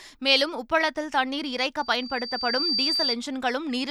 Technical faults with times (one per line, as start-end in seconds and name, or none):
1.78-3.16 loudspeaker feedback squeal